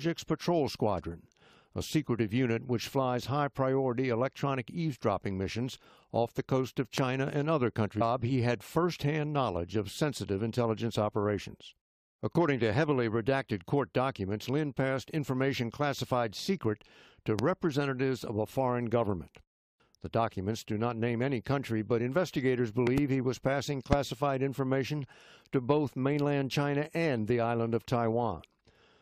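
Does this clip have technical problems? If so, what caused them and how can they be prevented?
Yes. Four loud pop events jump out, each roughly 20 dB above the surrounding sound: at 6.98–7.00 s, 17.39–17.41 s, 22.87–23.00 s (a double pop, slightly softer at about 15 dB), and 23.93–23.95 s. The sound continues underneath each one. The likely cause is a sudden voltage step or pulse, from a plug being seated, a switch, static discharge or a driver glitch, which the following circuitry shapes into a sharp thump. Secure connections, mute before switching, and control static to prevent them.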